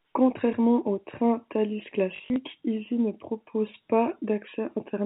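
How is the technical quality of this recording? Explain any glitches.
There is one glitch in this telephone-band speech: packet loss with the last packet repeated, from 2.16 to 2.36 s. The limit at about 4 kHz comes from G.711 telephone coding, which causes at most faint damage. About 120 ms of audio went missing in short gaps across those 200 ms, and the longest gap lasted 40 ms. Each time, the receiver replayed the previous chunk, which points to roughly 20 ms packets. The longer gaps give a brief buzzy, robotic stutter.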